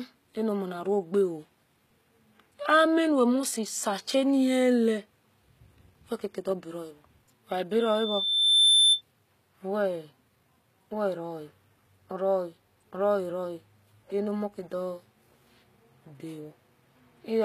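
Speech clip with plainly audible codec damage throughout: the treble sounds synthetic and gritty, with s sounds turned metallic, and nothing reaches above 14.9 kHz. This is likely HE-AAC compression, whose spectral band replication rebuilds the upper range from copied lower bands, consistent with a low bitrate around 20 kbps. From 7.79 to 9.01 s a loudspeaker feedback squeal appears: a single 3.6 kHz tone swells over about a second to roughly 10 dB above the speech. The microphone was picking up its own loudspeaker, and the loop gain exceeded one at that frequency.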